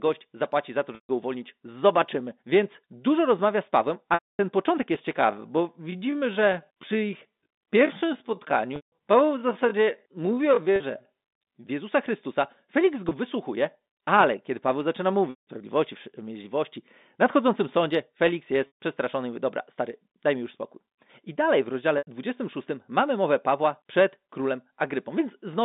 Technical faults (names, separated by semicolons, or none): packet loss with pitch repetition; time-stretched section